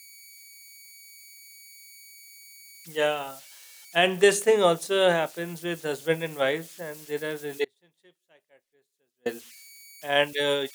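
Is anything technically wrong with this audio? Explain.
Yes, there are two faults. Throughout the speech, converter idle tones whistle faintly near 2 kHz, about 25 dB below the signal, as an undithered delta-sigma converter cycles through repeating bit patterns. From 7.65 to 9.26 s, an audio dropout to a faint residue leaves about 1.6 s of signal roughly 35 dB down, likely from a lost feed while the downstream path stayed live.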